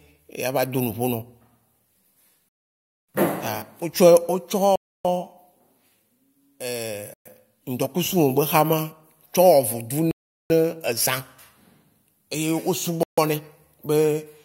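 Speech cuts to clean silence five times, at 2.49 to 3.09 s (0.6 s), 4.76 to 5.05 s (0.29 s), 7.14 to 7.26 s (0.12 s), 10.11 to 10.5 s (0.39 s) and 13.03 to 13.18 s (0.15 s). These are likely Bluetooth stalls: interference delayed packets and the headphone buffer ran dry until resent data arrived. Unlike garbled concealment, each gap is dead silence before speech resumes.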